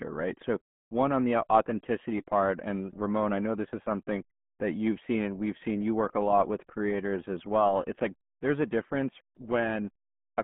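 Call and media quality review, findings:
RealAudio 14.4 codec, throughout speech. Muffled, gargly, nothing above 3.7 kHz, phone-line band near 150 Hz to 3.4 kHz. Probable component: legacy low-rate speech codec, heavy damage consistent with 8 kbit/s coding. Distinguishing: a plain narrowband line or low-pass filter would sound dull but clean. Here the gargle and smearing show model-based coding artefacts, not filtering alone.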